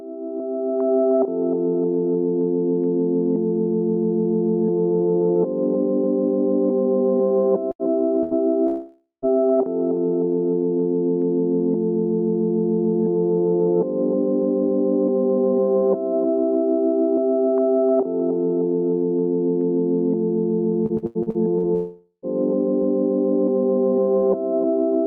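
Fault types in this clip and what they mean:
Burst of packet loss: A short run of audio data went missing, and the receiver covered the hole by extending the last sound while fading it down. It happens twice, at 7.71 to 7.82 s and at 8.23 to 8.34 s. Each gap is about 80 ms long. You hear a brief held buzz or hiss in place of the real sound. Then the audio picks up again slightly further along.
Long network dropout: A much longer stretch of sound never arrives. At 8.67 to 9.25 s, roughly 0.56 s is lost. The last sound is stretched into a fading tone, and the final 0.13 s or so goes quiet. At 21.75 to 22.26 s, about 0.48 s vanishes the same way, with a short silent tail. The likely cause is a connection stall rather than a single dropped packet.
Repeated packet loss (robotic sound): Between 20.86 and 21.66 s, audio data drops out again and again. There are six separate holes, the longest about 84 ms. 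Each one is patched by repeating the last sound before the next hole arrives. About a third of this span is filled in this way. The result is choppy audio with small pieces missing, and it ends shortly before the second dropout.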